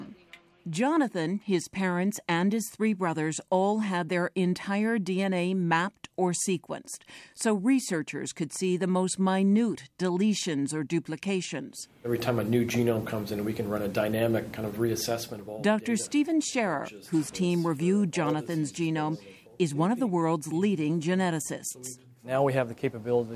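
No dropouts, distortion, level jumps or timing glitches turn up anywhere in the audio.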